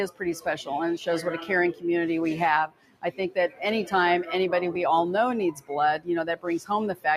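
A noise suppressor applied to music or sounds runs throughout. It treats held tones and tails as noise, so the level pumps by around 10 dB.

From 2.67 to 3.04 s, the noise suppressor cuts the sound, pulling it down by about 18 dB. The decay thins and sinks abruptly.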